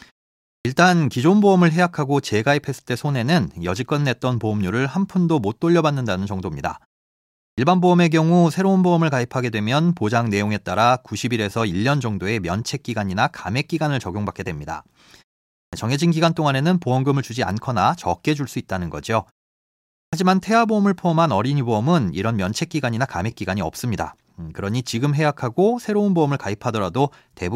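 An output device that sleeps through silences wakes late, giving a clipped start after a pause at 0.54, 7.45, 15.6 and 20.01 s. Each time, 110 to 130 ms of speech is lost, so speech begins abruptly.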